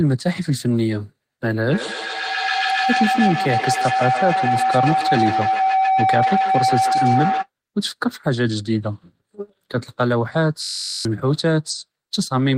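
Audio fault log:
1.67–7.49 s, feedback howl: A tone near 700 Hz swells to about the same level as the speech, pulsing roughly every 150 ms. Two devices in one room are on the call, and each trip through microphone and loudspeaker adds gain, so the repeats grow into a howl.
10.62–11.05 s, system hang loop: A steady buzz at 46.9 Hz replaces the speech. The computer or driver froze while the sound hardware replayed one 21.33 ms piece of audio 20 times, which fits a 1024-sample buffer. Roughly 400 ms of speech is lost.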